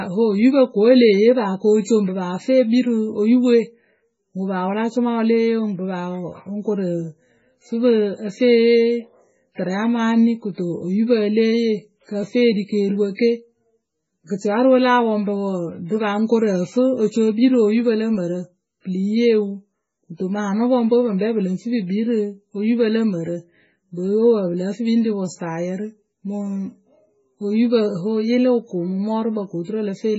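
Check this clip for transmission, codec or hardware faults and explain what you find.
One fault runs through the whole recording: heavy MP3 compression damage, likely from encoding at a very low bitrate, in keeping with about 16 kbps. Starved of bits, the encoder cuts the treble at a fixed point and drops weak frequency lines, which blink on and off frame to frame. The speech sounds watery and swirly, with chirpy sibilants and smeared consonant attacks. A spectrogram shows a hard ceiling at 7.6 kHz, with nothing above it, and patchy, flickering holes in the upper bands below that.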